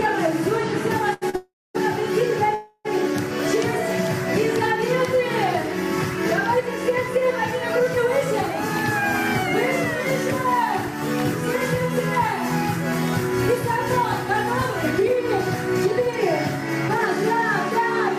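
At 1.13 s a short stall from a late packet holds the sound for about 80 ms, and a second one at 1.30 s holds it for 40 ms. In each case the jitter buffer ran empty when a packet was due, so the receiver stretched the last sound until the packet arrived and then carried on from the same point. Nothing is lost. What separates these from a freeze is their brevity: a slightly buzzy sustain.

From 1.36 to 1.77 s comes a call audio freeze. The held sound decays as a buzz and then drops into about 240 ms of silence, 390 ms in all, before the audio resumes exactly where it stopped. A second freeze runs from 2.55 to 2.87 s, about 300 ms long with 50 ms of silence. Both are likely caused by packets delayed in transit draining the jitter buffer. Their length and the drop to silence set them apart from the shorter stalls.

From 14.99 to 17.81 s a jitter buffer speed-up plays the audio at 107% speed while the pitch stays the same. 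Delay had built up beyond the buffer's target, and the receiver trimmed about a fifth of a second by removing many tiny pitch-period-sized pieces in succession. The result sounds hurried but not raised in pitch, which distinguishes it from a plain resampling speed change.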